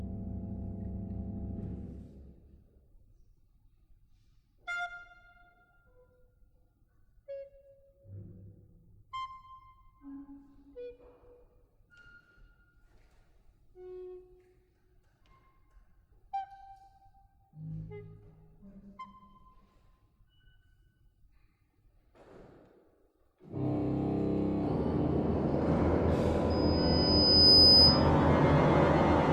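Loudspeaker feedback squeal from 26.50 to 28.11 s: a microphone re-amplifies its own loudspeaker, and a 5 kHz tone swells over about a second to roughly 10 dB above the audio.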